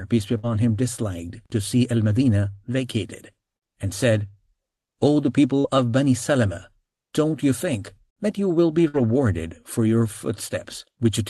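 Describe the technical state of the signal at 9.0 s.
At 9.0 s you're inside a burst of packet loss, running from 8.88 to 9.02 s. The receiver stretches the last sound for about 56 ms, fading it down, then picks up again with roughly 60 ms of the audio simply gone.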